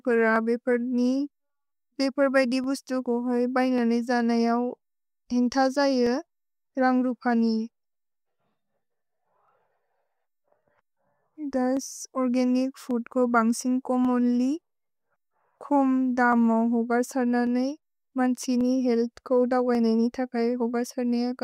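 Clock drift buffer slips run from 0.36 s to 20.89 s of this speech recording, heard as a click roughly every 1.14 s, around twenty in all. The steady spacing likely comes from two devices running on separate clocks that disagree by something like 300 parts per million, so the buffer between them gradually drifts until a short block of samples, on the order of fifteen, is dropped or repeated, leaving a tiny discontinuity each time.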